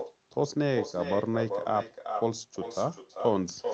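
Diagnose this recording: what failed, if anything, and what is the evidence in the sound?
Call processing is where this went wrong: echo with no canceller, running through the whole speech clip. Every phrase returns roughly 0.4 s later, only about 6 dB down and thinner, because the far end's loudspeaker feeds its microphone and nothing subtracts it before the Opus path, band-limited near 8 kHz, carries it back.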